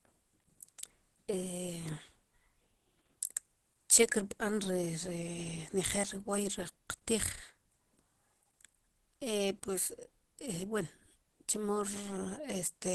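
Throughout, the speech sounds muffled and hoarse with nothing above 12.1 kHz, likely Opus compression in hybrid mode, grainy rather than MP3-like swirling.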